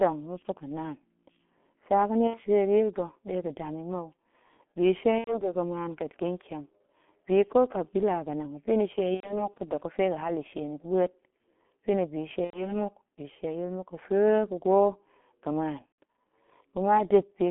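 Speech runs through a G.723.1 codec for its whole length, and the damage is heavy. The sound sits in a telephone band from about 200 Hz to 3.4 kHz, with nothing above. It is muffled and hoarse. Consonants smear because the codec updates its voice model only once per 30 ms frame. The coarseness fits its 6.3 kbit/s mode. On top of this there is VoIP packet loss concealed by the speech codec, at 2.27 to 2.42 s, 5.18 to 5.53 s, 9.15 to 9.50 s, 12.44 to 12.83 s, and a brief one at 15.86 s. In each gap the decoder keeps repeating its last pitch and filter at falling gain. So the sound smears into a buzzy tone or a coloured noise that fades. The missing stretches fit two lost 30 ms frames at 2.27 s, three at the next three events, and four at 15.86 s. The voice stays weak or distorted for a moment after each gap, because every frame builds on the last.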